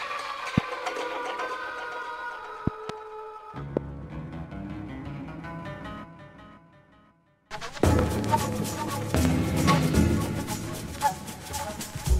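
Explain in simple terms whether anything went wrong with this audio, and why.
Loud pops interrupt the audio at 0.58, 3.77 and 7.99 seconds, and as quick double pops between 2.67 and 2.92 seconds and between 9.15 and 9.28 seconds. Each is a sharp thump that jumps well above the surrounding sound, while the sound itself carries on underneath. That continuity is what separates a pop from a dropout or a cut. The likely cause is a sudden electrical jolt from a plug, switch, static or driver glitch.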